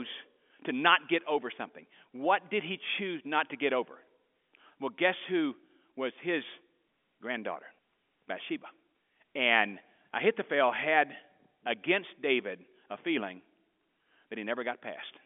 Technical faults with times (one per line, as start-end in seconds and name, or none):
none